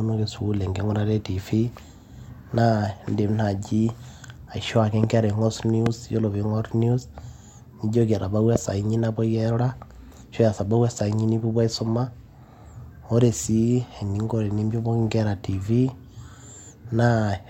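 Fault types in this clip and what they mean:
Loud pop: Sudden voltage spikes, likely from a switch or static. Three sharp pops jump well above the speech at 5.0, 5.9 and 8.6 s.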